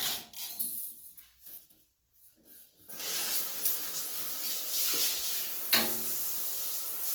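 Right through the clip there's plainly audible Opus compression damage, likely from its CELT music mode at a low rate, which would fit about 16 kbps. Content still reaches up to about 20.3 kHz, but starved bands get filled with noise, so everything turns rough and grainy.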